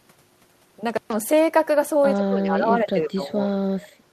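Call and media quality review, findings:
Intermittent contact, 0.90 to 1.13 s: speech cuts out for about 127 ms with crackle on both edges and faint hiss in the gap. Loose cable or plug opening briefly. Worth reseating the connector.

Speech suppressed in double talk, 2.16 to 3.88 s: talker's level pumps down in patches, deepest dip about 25 dB, roughly one and a half seconds affected in total. Likely the echo canceller clamping both directions while the far side talked.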